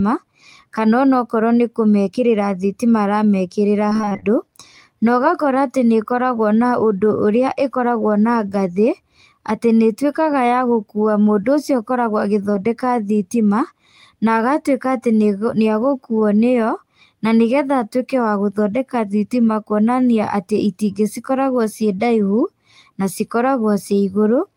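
From 3.89 to 4.24 s, repeated packet loss gives the speech a choppy, robotic quality. Short gaps arrive one after another, the longest about 27 ms, and roughly half the stretch is patched by extending the previous sound. On a spectrogram, harmonics smear into repeated flat segments; the waveform shows recurring copied cycles.

At 12.52 to 12.56 s comes a short concealed packet loss: about 20 ms never arrived and was filled by continuing the preceding sound before blending back, heard as a brief smear or wobble. The waveform shows a tiny repeated patch; the spectrogram shows a momentary blur.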